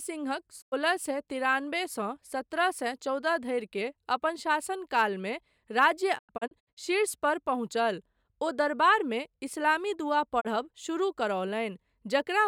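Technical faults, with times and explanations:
0.60–0.74 s, 6.17–6.79 s (just after "अपन शासन कालमे राज्य"), 10.40–10.47 s: digital broadcast dropout. The receiver lost frames and muted until good ones returned, so the sound fades out over 20 ms. The holes total 96 ms, 256 ms and 32 ms, which fits 32 ms frames. The middle event breaks into short gaps across 576 ms.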